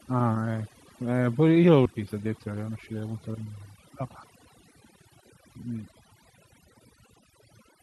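Throughout the clip, overdone noise removal leaves the background quieter but dotted with twinkling specks. The reduction is set too hard, so quiet parts of the speech vanish with the noise. The tonal chirps sit where the noise floor was, unlike the smearing of low-bitrate coding.

At about 1.85 s comes a skip ahead. Roughly a second of speech is gone, and the two sides meet almost directly, with no silence and nothing filled in. That seamless join marks it as dropped audio rather than a dropout, which would leave an audible hole.

From 1.95 to 3.09 s, jitter buffer speed-up runs the speech at about 113% while the pitch holds steady. After the jump, the receiver trims tiny pitch-period pieces, about 150 ms in all, to shrink its backlog, so delivery sounds hurried. An unchanged pitch separates this from a simple playback-rate error.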